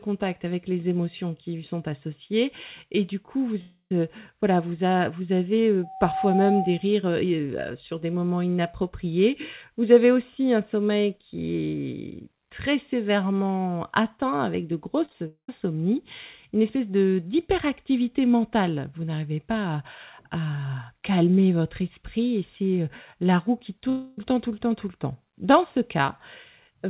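Long network dropout at 3.61–3.91 s: the speech breaks off for about 0.3 s, likely from a network gap, and a fading buzz fills the hole before roughly 90 ms of near-silence.

Loudspeaker feedback squeal from 5.83 to 6.93 s, right after "voilà vous avez": a 762 Hz tone, recirculating between loudspeaker and microphone, swells over about 0.4 s to roughly 5 dB above the speech.

Short concealed packet loss at 15.05–15.11 s and 15.13–15.15 s, just after "sévèrement atteint avec de": brief gaps of 10 to 20 ms are patched by extending the preceding sound, leaving quick smears.

A long network dropout follows at 15.27–15.49 s. The concealment buzz fades into about 110 ms of silence before the speech resumes with a portion missing.

Another long network dropout at 23.89–24.18 s is bridged entirely by a decaying synthetic continuation, with no silent stretch, before the real audio returns. Throughout, the band stops near 4 kHz, which fits a narrowband telephone codec.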